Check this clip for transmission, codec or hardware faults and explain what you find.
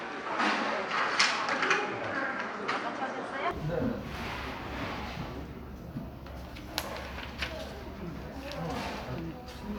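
One fault is present, most likely an input switched to a poorer device. From 0.0 to 3.51 s the everyday sound is duller, with nothing above 9.7 kHz, its own background noise around 30 dB below the sound, and a level roughly 5 dB different. At 3.51 s it clears abruptly, with no silence at the switch. A codec bandwidth drop would narrow the band alone. Here tone, noise floor and level all shift together, which points to a different microphone.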